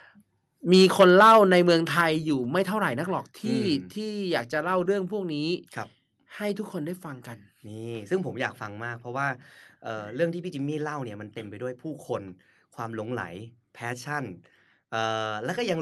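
Speech, and it opens hot: from 0.72 to 2.01 s the loudest syllables have that harsh, crackly edge of microphone overload, with peaks pushed roughly 8 dB past the converter's ceiling and a few percent of samples flattened at the top. The likely cause is the mic input gain simply set too high, so the waveform tops get sheared off. You then hear the microphone volume stepped down twice, as sudden drops that take the voice and the room with them: a small one of about 2 dB at 1.02 s, still inside the distorted stretch, and a bigger one of about 6 dB at 2.01 s, right where the clipping stops. That pattern likely comes from the call software noticing the overload and pulling the device's input level down in steps. The audio also carries the coding texture of a call path, with the top end ending around 12 kHz, which fits Opus at roughly 40 kbps.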